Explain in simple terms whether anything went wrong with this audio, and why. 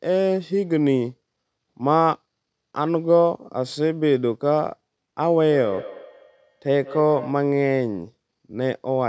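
From 5.51 to 7.46 s there is feedback echo between two devices. The speech comes back about every fifth of a second, thinner each time.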